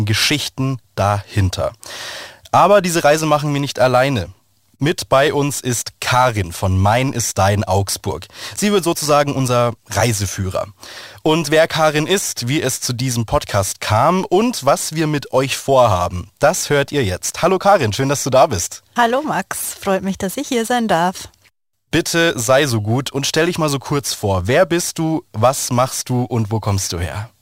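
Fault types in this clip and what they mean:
Crude rate conversion: samples were repeated without filtering, which fits a 44.1 to 48 kHz change, leaving gritty inharmonic fizz roughly 25 dB down, shown as stray spectrogram lines and waveform steps.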